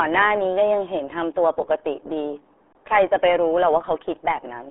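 Speech, run through the RealAudio 14.4 codec the whole way: muffled and gargly, nothing above 3.8 kHz, which fits an 8 kbit/s dial-up-era stream.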